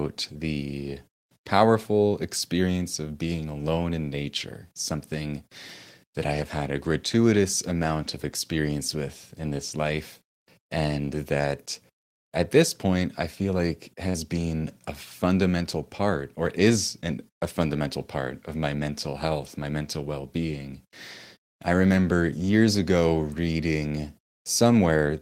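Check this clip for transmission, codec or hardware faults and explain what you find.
One transmission fault is present. From 14.09 to 14.25 s, just after "point I feel like", a burst of packet loss drops several consecutive packets. The receiver conceals this by holding the last sound for about 47 ms and fading it out. Speech then resumes further along, with about 40 ms of material missing.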